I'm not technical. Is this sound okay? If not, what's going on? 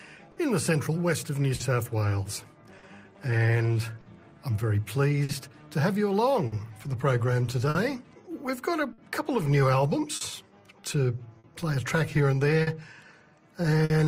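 No. There is clock drift between sender and receiver: the sending device runs about 4% slow, so the playback keeps stretching or briefly stalling, causing small, unevenly spaced timing hiccups throughout. There are also scattered short gaps: about ten brief dropouts between 0.32 and 13.92 s, the longest around 50 ms, each patched by extending the preceding sound, heard as quick ticks or smears.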